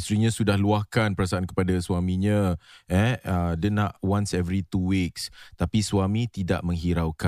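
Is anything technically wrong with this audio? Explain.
No, no technical faults detected.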